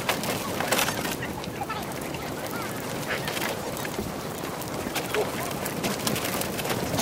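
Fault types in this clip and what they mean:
Audio read two samples at a time (double speed): sample pairs are taken as single frames, so the sound plays 2x fast and an octave up. On a spectrogram, content shifts upward. On the waveform, events look squeezed in time.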